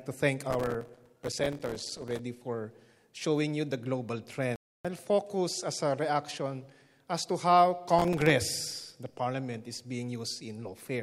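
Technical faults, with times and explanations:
0.51 to 2.19 s and 7.99 to 8.30 s, processor overload crackle: a burst of gritty crackle rides on the sound for about 1.7 s, then returns for about 0.3 s. The processor repeatedly failed to fill its small audio buffers on time, and each missed buffer came out as a few milliseconds of silence with hard edges. The density of clicks points to roughly a hundred misses in the first burst and about fifteen in the second. The crackle stops as the load eases.
4.56 to 4.85 s, digital broadcast dropout: the audio drops to silence for about 288 ms and resumes further along in the programme. The receiver lost the signal or rejected corrupted frames and muted its output until valid data returned. Whatever was transmitted during the gap is missing, and there is no repetition or smearing across it. A gap of that length fits around nine lost frames of about 32 ms each.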